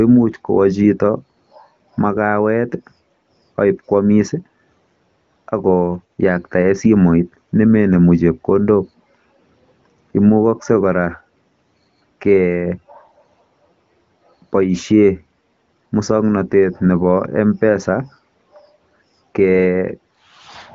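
Nothing goes wrong anywhere in this speech, which comes through an AMR wideband (HD Voice) link with the light coding character you'd expect from a rate of around 16 kbit/s.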